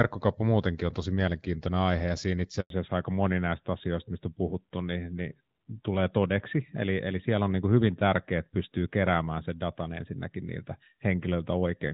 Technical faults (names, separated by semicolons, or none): handover gap; fallback to narrowband